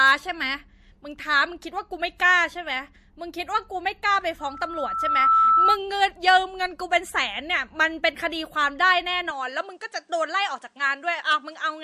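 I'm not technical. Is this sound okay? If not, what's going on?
No, there are three separate problems in this speech recording.

At 2.18 s there's a brief pre-echo: a tiny puff of hiss lands just before a sharp sound, making that sound a little soft or smeared. The compression that shrank the file works on short chunks of audio and spreads its noise across each chunk, so the noise meant for the loud moment leaks into the quiet instant before it. The chunks here seem to be about 36 ms long, and the compression never switched to the shorter chunks that would keep that leak in check.

From 4.39 s to 5.78 s you'll hear a loudspeaker feedback squeal, a single whistling tone around 1.3 kHz. It takes about a second to build and ends up a bit louder than the speech itself. The microphone is hearing the speaker it's feeding, and at that one pitch the loop keeps amplifying itself.

From 9.31 s to the end, the sound turns duller and slightly quieter, with nothing above about 10.5 kHz. 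This is most likely the input being switched to a poorer device, such as a different mic or a headset, part way through. The change happens cleanly with no gap, and the new device adds only a faint bit of background noise.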